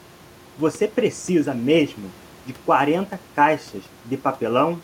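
The speech signal is intact throughout, with only the room's own background noise sitting about 29 dB below it.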